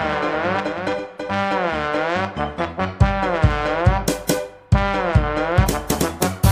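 From the start to 1.4 s there is a doubled audio track: a full-band copy trails about a third of a second behind, roughly 5 dB quieter, likely from a slower second capture path. On a spectrogram, features repeat shifted right without smearing, then stop abruptly at 1.4 s.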